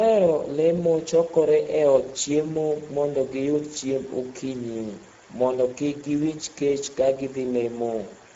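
Speex codec damage runs through the whole speech clip: the CELP coder has too few bits for the excitation, so the voice sounds plainly hoarse and noisy, which points to roughly 10 kbps. A spectrogram shows smeared harmonics and nothing above 7.7 kHz.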